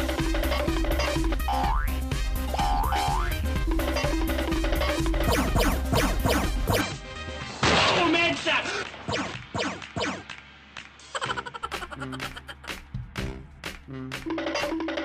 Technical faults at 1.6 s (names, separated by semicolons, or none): none